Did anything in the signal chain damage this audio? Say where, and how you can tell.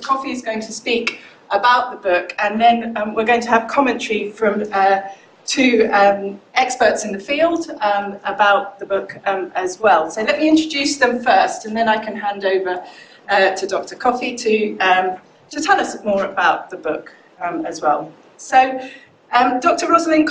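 No, the signal chain shows no damage anywhere.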